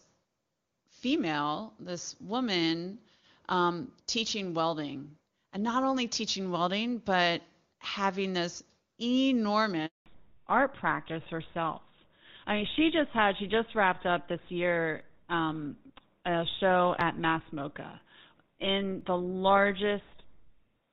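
At 9.86 s the sound dies away and stays silent for 200 ms, until 10.06 s. This is a handover gap: the call was switching networks and no speech frames came through during the move, so that stretch is simply lost. Unlike a packet-loss burst with concealment, there is no smeared or buzzy filler. The audio fades within a few tens of milliseconds into true silence, and when it resumes it sounds different.

From 10.06 s to the end the audio is audibly duller and rougher. This is a fallback to narrowband: after the handover the call dropped from HD Voice to an older narrowband codec, which fits GSM full rate. Nothing above 4 kHz survives, so sibilants and breath lose their crispness. Before the gap the wideband codec was carrying the full upper band cleanly, at a quality that points to AMR-WB at its top rate. That before-and-after contrast, starting exactly at the gap, separates this from a steady low-pass filter or a band-limited microphone, either of which would dull the whole clip.

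Between 15.02 s and 19.01 s there are about five small ticks, spaced almost exactly 1 s apart. These are periodic USB or driver dropouts. A background task stalls the audio path at a fixed interval, and a few milliseconds of signal are skipped outright rather than replaced with silence. Their clockwork regularity, and the fact that they sound only where there is signal, separate them from random network clicks or crackle.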